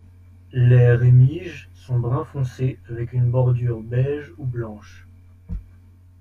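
Throughout the speech, channel delay (comb filtering) is audible: one channel lags by around 20 ms, and the mono sum cuts regularly spaced notches from about 20 Hz, leaving a rough, slightly doubled sound.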